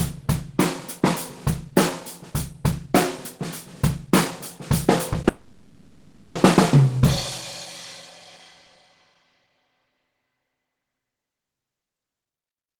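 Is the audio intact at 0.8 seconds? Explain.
Yes, the audio is intact at 0.8 seconds, with no dropout, click, distortion or other fault at that moment.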